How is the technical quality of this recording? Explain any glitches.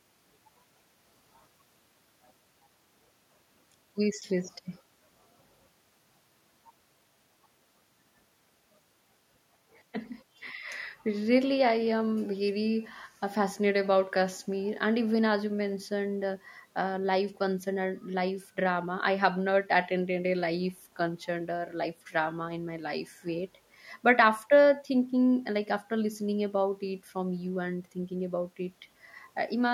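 Nothing in this speech recording glitches or breaks up, so there aren't any faults to walk through.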